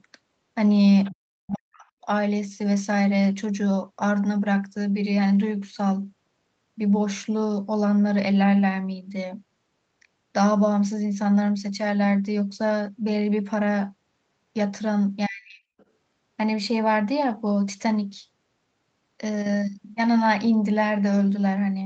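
Other side's voice leaking through, at 1.05 to 1.15 s, is a brief, faint second voice about 25 dB below the talker. The likely cause is a loudspeaker-to-microphone path that the echo canceller did not fully cancel. The same scrap returns at 15.24 to 15.29 s at a similar level, and once more at 15.79 to 15.85 s, weaker still at about 35 dB down, just a fleeting ghost under the main sound.

Speech suppressed in double talk follows straight on, from 1.15 to 1.93 s. For roughly 0.7 s the talker's voice sinks and breaks up, dropping by as much as about 40 dB in places. It is likely the canceller, faced with both sides at once, turning everything down instead of only the echo. It recurs at 15.27 to 15.73 s, overlapping the leak, with around half a second of dipped, patchy voice.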